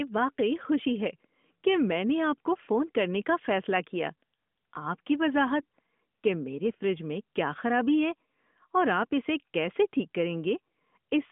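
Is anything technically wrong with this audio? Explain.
Yes. There are AMR bit errors at 5.62 s, just before "کہ میرے فریج میں". Flipped bits in the weakly protected parts of the frames put the codec's excitation pulses and finer parameters slightly wrong, at a rate of roughly two percent. The sound turns briefly hoarse and scratchy but keeps its pitch and loudness. That sets it apart from frame loss, which mutes or repeats sound, and from the steady, light band-limiting of the AMR narrowband path.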